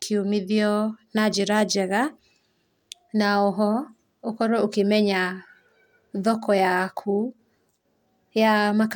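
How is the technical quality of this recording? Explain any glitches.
Nothing in this recording stood out as a technical problem on listening, so there are no glitches to explain.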